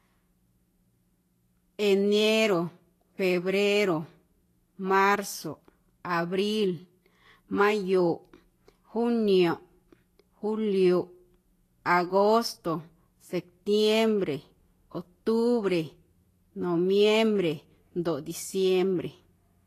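Low-bitrate Vorbis compression is the likely cause of the damage running through the whole of this speech recording. The encoder appears to have had too few bits, consistent with a rate near 33 kbps, so it cut off everything above 14.2 kHz and quantised the remaining treble coarsely. Fine high-frequency detail has turned into noise of similar energy, giving plainly audible hiss and graininess, roughened tone and smeared consonant onsets.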